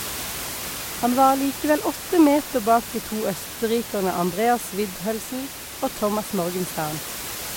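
Nothing goes wrong anywhere in this speech clip; the only thing in the background is some room noise sitting about 11 dB below the speech, and that's just part of the space the microphone was in.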